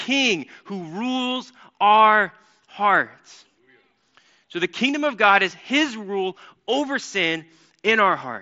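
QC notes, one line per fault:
No faults found in this speech; it comes over the Bluetooth mSBC headset codec, which band-limits it to about 7.7 kHz.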